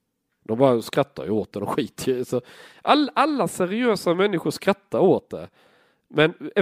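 No dropouts, glitches, distortion or other transport or processing faults can be heard anywhere in the recording.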